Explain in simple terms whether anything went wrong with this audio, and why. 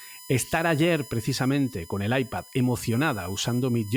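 There's a steady, high-pitched whine under the speech for the whole clip, a classic case of USB whine. A USB connection draws power in rapid, regular bursts, and some of that leaks into the audio through the power or ground wiring. Here the whine is built on a 1 kHz pitch, with its loudest part up around 10 kHz. It sits well below the speech.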